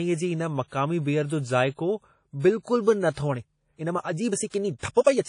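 From the start, the speech carries a ringing, washy texture, with hiss that swells and recedes along with the signal. That points to WMA compression, likely an early WMA 1 encoder at a rate that fits 32 kbps. Its long transform blocks smear quantisation noise over tens of milliseconds and zero out weak spectral lines. This separates it from broadband noise or plain low-pass filtering: the hiss moves with the sound rather than sitting steady underneath.

At 3.26 s the pace abruptly jumps and stays rushed through to 5.29 s, running about 1.53 times faster while the pitch holds where it was. This is a time-stretched section, likely squeezed to fit a length by software that drops short pieces of audio to keep pitch constant, which leaves a rushed flow. Unlike simple speed-up or resampling, which would raise the pitch along with the tempo, only the timing changes here.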